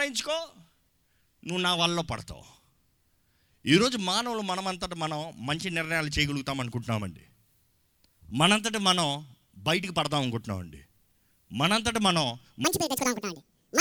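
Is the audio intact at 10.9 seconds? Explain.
Yes, at 10.9 seconds the audio is intact, with no audible fault at that moment.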